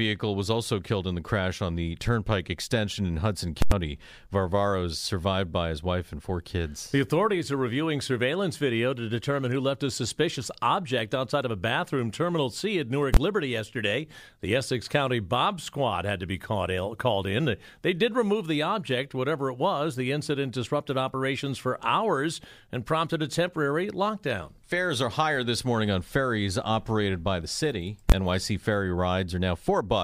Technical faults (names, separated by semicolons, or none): invalid numbers at full scale